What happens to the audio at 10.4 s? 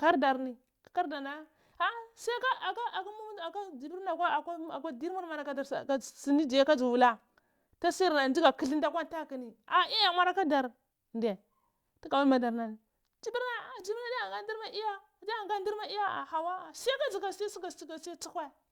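Nothing goes wrong at 10.4 s; the speech continues intact through that moment with no dropout, click or distortion.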